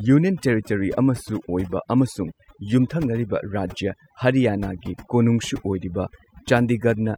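All the way through, there's overdone noise removal: bands near the noise floor get gated out, so the background goes dead with twinkly specks.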